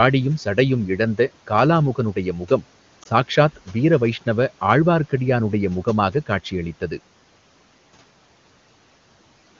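At 3.03 to 3.07 s there is a lost AMR speech frame: a single 20 ms frame failed its radio checksum, so the decoder filled the slot by repeating the previous frame's pitch and vocal tract settings at reduced gain. It comes across as a brief dip or warble rather than a hard silent gap or click, and it doesn't stretch into the drawn-out fade of a longer frame loss. The room noise, about 25 dB below the speech, continues underneath.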